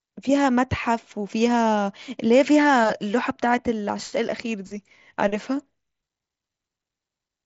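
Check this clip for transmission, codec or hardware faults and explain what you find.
No transmission, codec or hardware faults found; the speech runs over the mSBC wideband headset path, with nothing above about 7.7 kHz.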